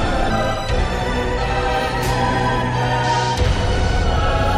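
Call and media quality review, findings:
Skip ahead at 0.30 s: audio jumps forward with no audible gap, and roughly half a second of sound is simply gone, the two sides butted together. Probable component: jitter buffer. Mechanism: buffer overflowed, or the stretch was lost in transit while later audio was already queued. Playout discarded it rather than stalling, cutting latency by about half a second in one step.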